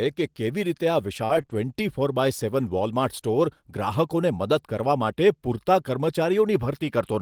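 A speech recording with a dense cluster of network damage packed between 1.25 and 1.55 s. Short concealed packet loss appears three times: about 40 ms near 1.25 to 1.31 s, then two 20 ms holes back to back at 1.41 to 1.45 s and 1.45 to 1.49 s. Each time the audio never arrived, so the receiver extended the preceding sound and then faded back into the real signal, which gives a brief smear or wobble where a short consonant can drop out. Interleaved with these, two stretches were lost packet rebuilt from error correction: about 60 ms at 1.29 to 1.39 s and 40 ms at 1.49 to 1.55 s, which fits several separate frames each recovered from the low-bitrate copy carried in the following packet. There is no gap there, but the sound turns rougher and grainier. A spectrogram shows those patches as noisier and less cleanly structured than the surrounding speech.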